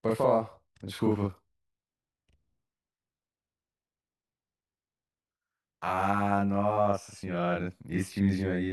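Channel delay (doubling) runs throughout the speech, from start to finish. One channel arrives 40 ms behind the other, and when the pair is folded to mono the late copy lands at the same level as the original. At that spacing the ear no longer fuses them. Every syllable onset is followed by a distinct second hit, so the voice sounds doubled, with a short slap echo trailing each consonant.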